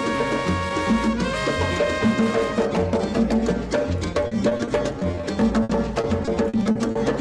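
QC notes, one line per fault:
4.27–5.25 s: repeated packet loss (robotic sound). Short holes up to 40 ms are patched by repeating the last sound, so about 18% turns choppy.
5.63–6.97 s: repeated packet loss (robotic sound). The gaps are longer, up to 60 ms, and each is filled by stretching prior sound, which gives a choppy texture with pieces missing.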